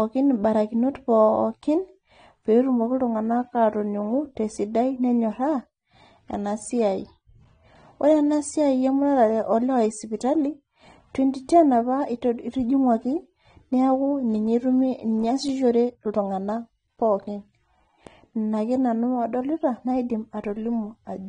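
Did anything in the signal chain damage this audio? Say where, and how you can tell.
Yes. AAC compression runs through the whole clip: nothing reaches above 9.7 kHz, and the speech sounds dull and smeared, with a warbling, fizzy texture on sibilants and held vowels. The damage sits at the codec stage, likely an AAC-LC encode. At a low bitrate, fitting roughly 32 kbps, the encoder quantises each frame's spectrum so coarsely that it drops the top band and thins what remains, leaving a swirling texture.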